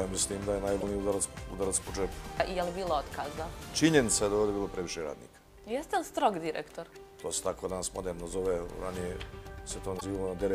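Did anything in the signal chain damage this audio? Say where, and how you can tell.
Yes. The damage sits at the codec and storage stage: damaged data in a compressed stream, heard as two brief glitches, from 0.77 to 0.83 s and from 9.97 to 10.02 s, each about 56 ms long. At both points the bitstream bytes were wrong, so the decoder misread the affected frames and lost sync until it found a valid frame header. On a spectrogram each appears as a short, smeared broadband patch, and on the waveform as a brief, discontinuous splice.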